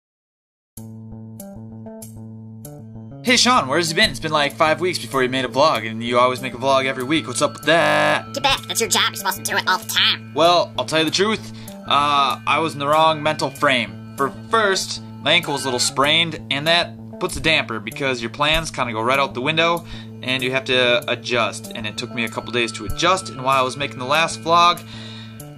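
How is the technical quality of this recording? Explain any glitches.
There is one clear glitch. From 7.82 to 8.14 s there is a system hang loop. The system froze while the sound hardware kept cycling its ring buffer. A single 20 ms slice plays 16 times in a row. At a 50 Hz repeat rate, it sounds like a steady buzz.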